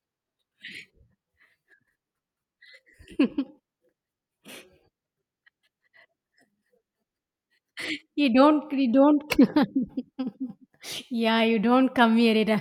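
Speech recording with no audible technical faults anywhere.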